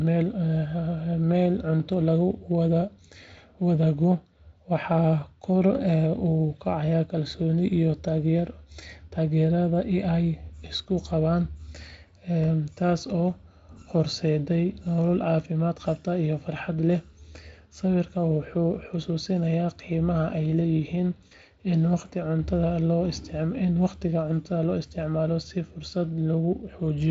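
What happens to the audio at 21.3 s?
Around 21.27 to 21.33 s there is a brief VoIP packet loss concealed by the speech codec. About 40 ms of data never arrived, which fits two 20 ms frames, and the Speex decoder bridged the hole by extrapolating its last pitch and filter at falling gain. Unlike a plain dropout, there is no hard silence or click. The sound smears into a short buzzy tone or coloured noise that fades, and stays weak or distorted for a moment after packets return.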